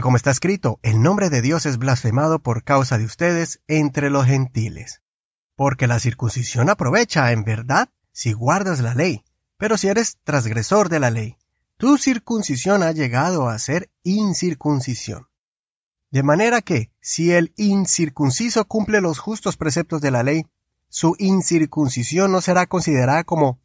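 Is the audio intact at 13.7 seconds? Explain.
Yes, the speech at 13.7 seconds plays through intact, with no dropout, glitch or other fault at that moment.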